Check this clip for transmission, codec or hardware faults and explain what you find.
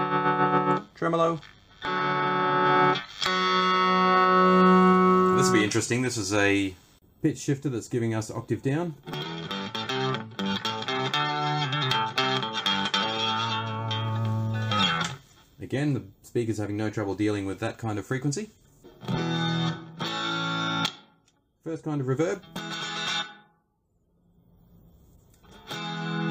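One fault is present. From 2.66 s, pre-emphasis is left on. A 50 µs FM treble boost was never reversed, leaving 10 kHz about 10 dB high. Sound turns thin, bright and sibilant.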